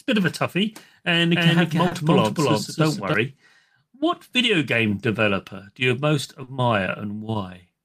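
A speech recording carries two separate faults. Right after "of a toughie and", from 1.34 to 3.14 s, the sound is heard twice: a dry, full-band copy at roughly equal loudness trails by around a third of a second, then cuts in and out abruptly. This doubled audio track likely comes from a second capture path or an edit leaving two unaligned copies. At 1.87 s and again at 6.43 s, just after "developer do you most", brief smears interrupt the flow. These are short concealed packet losses: in each case about 40 ms of audio never arrived, and the decoder bridged the gap by extending the preceding sound before rejoining the real signal.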